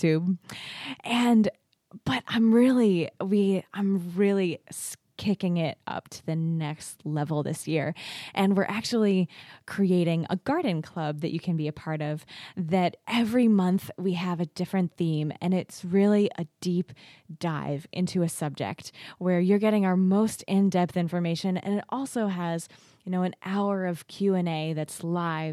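No technical faults are audible anywhere in the speech recording.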